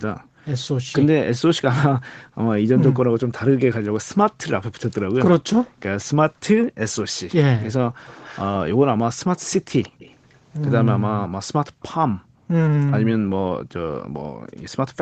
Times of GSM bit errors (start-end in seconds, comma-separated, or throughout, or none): none